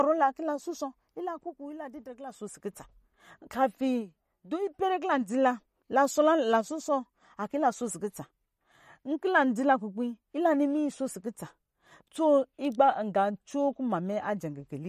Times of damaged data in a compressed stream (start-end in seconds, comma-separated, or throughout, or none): none